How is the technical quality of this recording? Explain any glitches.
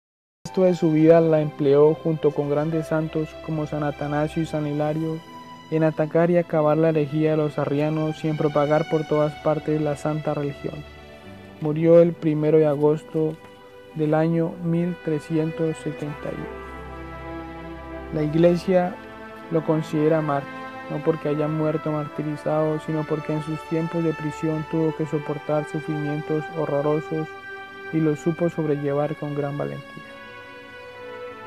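The recording has one glitch, a cut-off start. From 0 to 0.46 s there is only digital silence, then at 0.46 s the audio begins abruptly in the middle of a sound, with no natural attack or fade-in. Capture likely started late, after the sound was already under way. A waveform shows a flat line that jumps straight to the ongoing signal; a spectrogram shows a blank region ending in a sharp vertical edge.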